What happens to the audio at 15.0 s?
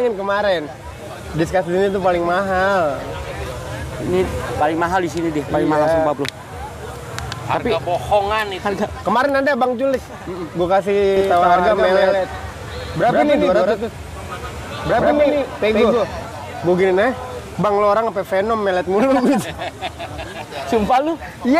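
At 15.0 s the audio is in a doubled audio track section, running from about 11.2 to 16.2 s. A second full-band copy trails the original by roughly 150 ms at about equal level, likely from a slower parallel capture path, giving a dry, abrupt slapback with no room decay.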